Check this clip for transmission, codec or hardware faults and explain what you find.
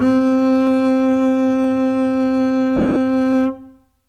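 Two kinds of fault turn up in this music: three isolated clicks from dropped samples and one stretch of lost LE Audio frames.

Dropped samples occur at 0.67 s, 1.64 s and 3.33 s. Each is a single sharp click, likely caused by a fraction of a millisecond of the stream going missing so the waveform jumps straight to a later value. Nothing audible is removed, which separates these clicks from the frame loss.

Lost LE Audio frames affect 2.76 to 2.96 s. About 127.5 ms of audio is missing, scattered over 195 ms, which fits around 17 lost frames, the longest run being around 30 ms. The LC3 decoder fills each gap by repeating the last spectrum with randomised signs, so tones smear into noisy, grainy patches. Unlike the clicks, this blurs sound over an audible stretch.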